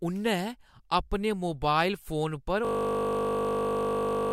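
At 2.65 s, right after "अपने मोबाइल फोन पर", the speech gives way to a system hang loop that runs to the end of the clip. The host or driver stopped supplying new samples while the audio hardware kept replaying the same short stretch of its ring buffer. Here the looped piece is 20 ms long, so it repeats 50 times a second and is heard as a steady, flat 50 Hz buzz instead of speech.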